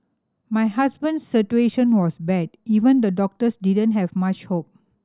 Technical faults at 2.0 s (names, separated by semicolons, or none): none